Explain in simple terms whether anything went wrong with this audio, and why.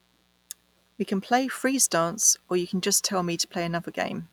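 A mains buzz runs under the speech from start to finish. It is a steady, raspy hum. Electrical spikes from the 60 Hz power supply leaked in, twice per cycle, adding harsh overtones. It sits fairly quietly beneath the speaking.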